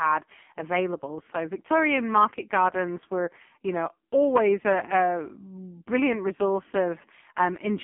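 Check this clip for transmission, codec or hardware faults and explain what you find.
One codec fault runs through the whole clip. Throughout, the speech shows heavy AMR narrowband mobile codec damage. The band is confined to 200 Hz to 3.5 kHz, and the vocal-tract model with sparse pulse excitation leaves it buzzy and synthetic, which fits a rate near 5 kbps.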